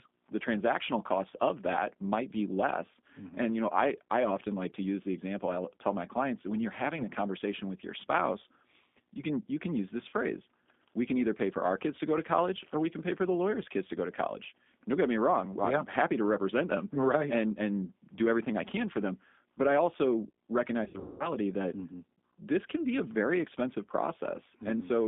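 Throughout, the G.729 codec leaves a rough, slightly synthetic texture that fits an 8 kbit/s coder rebuilding each 10 ms frame from a filter and a few pulses. On a spectrogram the energy sits in a 200 Hz to 3.6 kHz band with nothing above.

VoIP packet loss concealed by the speech codec cuts out about 20 ms at 6.97 to 7.04 s and 40 ms at 10.09 to 10.14 s. At 20.84 to 21.30 s, 280 ms is lost across 360 ms, with the longest run 200 ms. Each gap is filled with a buzzy tone or coloured noise that fades. The decoder stretches its last pitch and filter at falling gain, which shows as flat harmonic stripes and a tapering waveform envelope.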